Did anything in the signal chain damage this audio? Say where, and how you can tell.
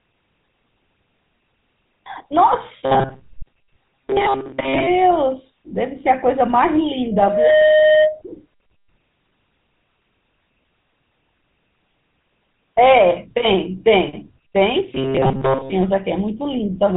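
Yes. At the codec stage, the whole recording has been through the GSM full-rate codec. Nothing reaches above 3.8 kHz, and the speech carries a plainly audible buzzy, gravelly roughness. That points to 13 kbps GSM, which rebuilds the voice from a vocal-tract model driven by sparse pulse excitation.

At the acoustic and analogue stage, a loudspeaker feedback squeal runs from 7.11 to 8.21 s. A single 617 Hz tone swells over roughly 0.4 s to about 5 dB above the speech. The microphone was picking up its own loudspeaker, and the loop gain exceeded one at that frequency.

At the driver or buffer stage, there is a robotic sound from repeated short buffers between 14.93 and 15.72 s. The speech turns into a rigid metallic buzz at 134 Hz, with most of that stretch replaced. This is likely from late audio being covered by looping a segment of about 7.5 ms.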